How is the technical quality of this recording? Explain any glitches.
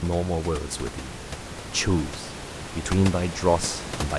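No glitches are audible: the signal is intact throughout, and the only thing beneath the speech is the room's own background noise, sitting about 10 dB lower, which belongs to the recording space rather than to the system.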